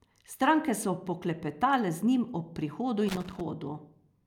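From 3.09 to 3.41 s, a loose connector crackle chops the speech as a worn contact makes and breaks, producing an irregular burst of scratchy crackle.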